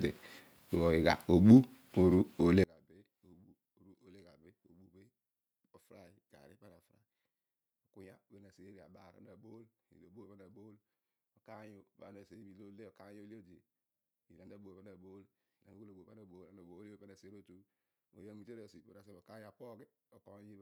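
From about 2.64 s to the end, the speech collapses to a faint trace, roughly 33 dB down when summed to mono. That's likely one channel inverted: with one side's polarity flipped, the shared centre content cancels, leaving only the small difference between channels.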